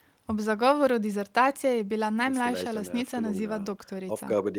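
No technical faults can be heard anywhere in the speech recording.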